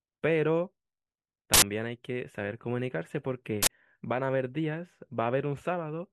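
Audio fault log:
1.54–1.62 s and 3.63–3.67 s: uninitialised buffer. Two short, loud bursts of digital noise cut into the speech. Each block played before audio was written to it, so leftover memory came out as samples. Lengths of 85 ms and 43 ms fit 4096- and 2048-sample blocks.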